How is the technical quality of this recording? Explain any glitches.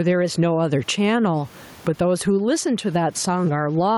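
The recording is compromised by gain pumping that runs through the whole clip. Throughout, the level breathes: the gain swings by around 15 dB, with the room tone sitting about 35 dB below the speech. The likely cause is input gain set far too high, with a fast limiter clamping every peak, which squashes the dynamics.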